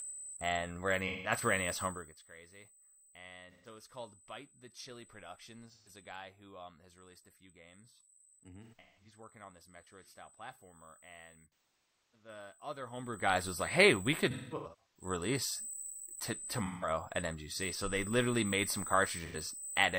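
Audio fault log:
Throughout: USB whine. A steady, fixed-pitch tone sits at 8 kHz, about 15 dB below the speech, and does not follow the talker at all. That pitch matches the 125 microsecond microframe rate of a USB bus, so the supply or ground of the interface is picking up the bus's periodic current draw and feeding it into the audio path as a constant high whistle under everything.
1.03 to 1.31 s, 3.44 to 3.67 s, 5.66 to 5.89 s, 8.63 to 9.12 s, 11.46 to 12.28 s, 14.26 to 15.05 s, 16.58 to 16.89 s, 19.19 to 19.36 s: AAC frame loss with concealment. The first gap comes right after "and where" and the last right after "they literally made some". The short ones, roughly 85 to 170 ms of missing audio, are smeared, phasey patches where the decoder reused the last good spectrum. The 8.63, 11.46 and 14.26 s events are clusters of losses spread over 0.4 to 0.6 s, and the longest run, about 0.3 s in the 11.46 s event, sinks toward silence before the signal fades back in. 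The missing stretches are multiples of about 43 ms, which fits AAC's 1024-sample frames at 24 kHz.
1.86 to 2.22 s and 12.84 to 13.4 s: zipper noise. In the first span the level drops by about 20 dB, and in the second, which ends just before "was like hey we", it rises by about 20 dB. Each change is made in 2 dB jumps, roughly 30 and 20 per second, with no ramp between them. Every jump is a small discontinuity in the waveform, so the level moves with a fast ticking, zipping texture instead of a clean glide.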